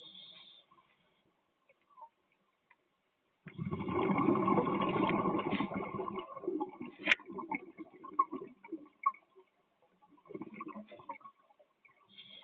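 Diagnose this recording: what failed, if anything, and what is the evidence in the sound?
The failure is in call processing: a noise suppressor built for speech was left active on non-speech audio. Across the whole clip it treats sustained and ambient content as noise, so the gain swings by around 20 dB. Onsets pass largely intact while held material and decay tails are pulled down. The band stops at 8 kHz, consistent with an Opus path that fits roughly 24 kbps, and that band limit is expected for such a call.

The suppressor cuts the sound harder in five stretches. The longest runs from 0.61 to 3.45 s, with about 12 dB of drop and roughly three seconds affected. Shorter dips follow at 7.67 to 8.02 s (about 11 dB), 8.53 to 9.02 s (about 11 dB), 9.19 to 10.28 s (about 12 dB) and 11.32 to 12.10 s (about 11 dB). In each, steady or fading content is classed as noise and attenuated, or its decay is truncated.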